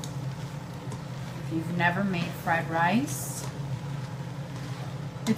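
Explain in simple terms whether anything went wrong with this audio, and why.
At about 3.65 s, a dropped buffer (overrun) likely occurred: the recording program fell behind, and the hardware overwrote a tiny stretch of audio, a couple of milliseconds, before it was saved. The sound on either side is joined directly, causing a small skip forward.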